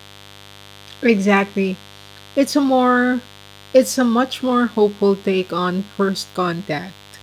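A raspy mains buzz sits under the speech throughout, roughly 25 dB down, from 50 Hz switching spikes whose harmonics climb into the kilohertz range, unlike a smooth, pure hum.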